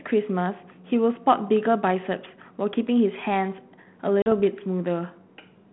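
At 4.22 s the speech drops into an abrupt, hard-edged silence of about 40 ms. It comes back unsteady and slightly distorted, settling by about 4.33 s. This is packet loss on an ADPCM call. A couple of packets went missing on a G.726 link, which is running at 32 kbit/s within a 150 Hz to 3.4 kHz telephone band. The missing audio was filled with silence, and the decoder's adaptive predictor and step size drifted out of step with the sender's, so the speech is briefly distorted until it resynchronises.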